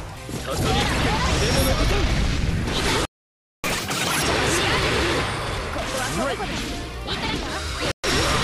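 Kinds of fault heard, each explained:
Playback stall: The sound cuts out mid-flow at 3.05 s and stays silent for about 0.59 s before resuming at 3.64 s. The likely cause is the player running out of data or its thread being blocked, so output halted until it recovered.
Catch-up at higher speed: Right after the stall, from 3.64 to 4.23 s, the audio runs at double speed and jumps nearly an octave in pitch, then drops back to normal. The player is resampling its backlog to win back the time lost.
Chunks out of order: Brief jumbled moments at 4.64 to 4.83 s, 5.48 to 5.57 s and 7.25 to 7.34 s. A block of about 46 ms played three places late in the first and one place late in the other two, leaving hard joins at each seam.
Bluetooth stall: A short dropout to silence at 7.92 s lasts about 0.12 s, then the sound picks up again. This was likely interference holding up wireless packets so the headphones' buffer ran dry until the resent data arrived.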